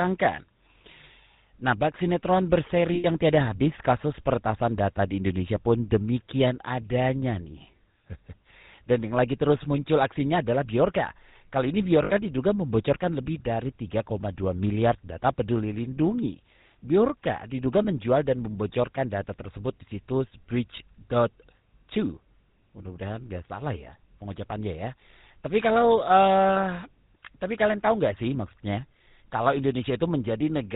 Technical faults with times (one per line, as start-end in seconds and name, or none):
0.00-30.76 GSM full-rate codec
2.94-3.06 lost GSM frames
12.04-12.11 lost GSM frames